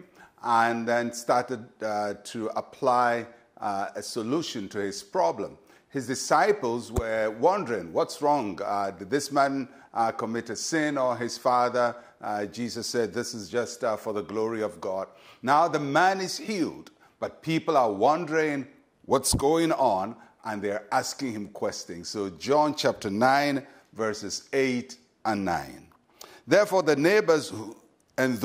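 Nothing here stands out as a technical problem; it's just ordinary audio with no faults to point to.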